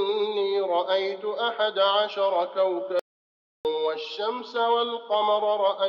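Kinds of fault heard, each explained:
Audio dropout to silence: the sound cuts to silence from 2.99 to 3.65 s, likely a lost input, showing as a flat waveform and blank spectrogram.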